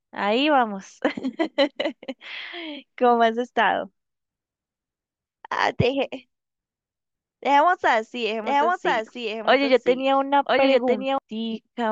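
From 8.44 s to 11.18 s a doubled audio track appears: a second copy of the speech, about 5 dB quieter, runs about a second behind, likely from a slower capture path. Unlike an echo or reverb, it has no decay or room colour and starts and stops abruptly.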